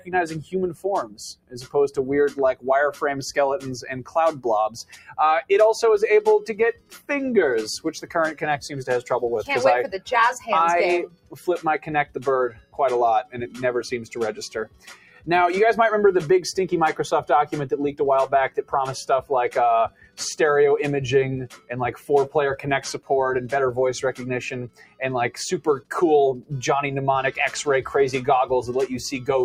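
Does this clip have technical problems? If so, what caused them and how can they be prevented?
Yes. Throughout the clip, a noise suppressor applied to music or sounds is treating sustained tones and tails as noise, so its gain swings by around 15 dB. Onsets pass while held parts and decays are pulled down, giving a pumping, thinned character. On a waveform the envelope breathes unevenly after each attack. On a spectrogram, steady harmonic lines and reverb tails fade or break up early instead of decaying smoothly. Prevention: turn off the speech-oriented suppressor, or use a music mode, whenever the input is not speech.

Sound cut by the noise suppressor is heard in five stretches: 0.0–5.18 s (drop of about 20 dB), 6.4–15.28 s (about 20 dB), 18.49–20.2 s (about 19 dB), 21.47–23.1 s (about 18 dB) and 24.13–26.52 s (about 20 dB). Within each stretch only parts are hit, roughly two seconds in the first, three in the second and under a second in each of the others. 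The affected moments show as sudden dips in the waveform and as darkened, gappy regions across the spectrogram where sustained energy should continue. Prevention: bypass noise suppression for non-speech material, or lower its strength so steady sounds are not gated.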